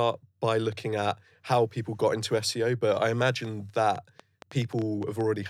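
A train of clicks from 3.45 to 5.22 s, after "but I": about ten unevenly spaced pops, 6.25 per second, likely from interference or interface trouble.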